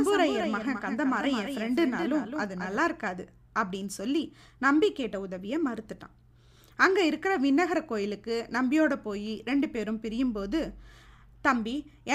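From the start until 2.78 s the speech has a doubled audio track: a full-band copy trails about a fifth of a second behind, about 5 dB quieter, likely from a second, slower capture path. Unlike echo, it carries no decay or room colour and stops abruptly.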